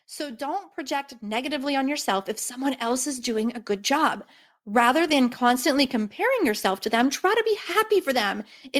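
Speech recording with automatic gain rising from 0.16 to 3.97 s: the AGC judges the input too quiet and ramps gain up about 12 dB, lifting voice and background together.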